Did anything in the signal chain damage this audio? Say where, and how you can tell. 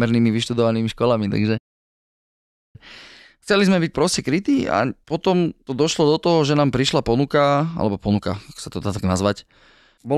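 Yes: a playback stall from 1.57 to 2.76 s silences the speech mid-flow for 1.17 s, likely the player running out of data or its thread blocking.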